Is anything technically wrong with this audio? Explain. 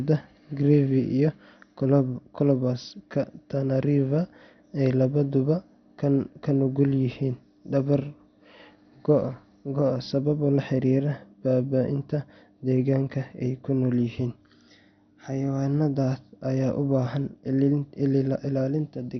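Yes. Throughout the speech, nothing sounds above 6.2 kHz, with gurgling, granular distortion, likely MP2 compression at a low bitrate, switching off upper sub-bands and coarsely quantising the rest.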